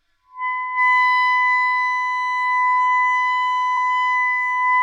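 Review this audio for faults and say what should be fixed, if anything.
A brief stutter at 3.76 to 3.81 s replays the same 46 ms of sound. These are repeated frames: a block of compressed data, which fits a pair of frames, was written twice, adding 46 ms. Check the encoder's output buffering and write each frame only once.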